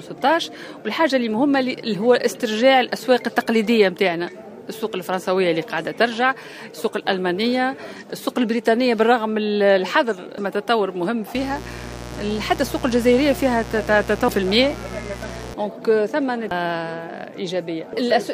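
A short audio clip with two kinds of technical fault. At 10.38 s and again at 16.51 s the sound lurches forward, losing roughly 0.7 s each time. These are compressed frames skipped: about ten whole codec frames, with a frame length near 93 ms, were missing or rejected by the decoder. From 11.35 s to 15.54 s a steady, raspy mains buzz sits about 15 dB below the wanted sound. Sharp switching spikes at twice the 60 Hz mains rate are getting into the signal, most likely from a dimmer, rectifier or unshielded connection, and their harmonics extend well into the kHz range.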